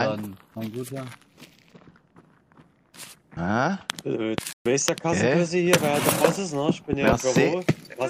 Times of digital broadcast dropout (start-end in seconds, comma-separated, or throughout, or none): 4.53-4.66